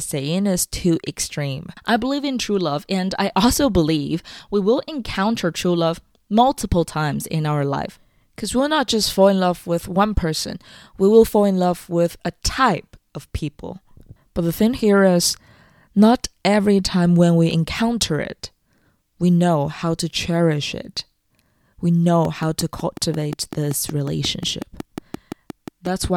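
Speech, with a train of clicks from 22.25 to 26.05 s: about twenty closely matched ticks at a steady 5.5 per second, peaking roughly 10 dB above the signal. The even spacing and matched shape separate it from random crackle, likely from interference or a faulty connection or power supply.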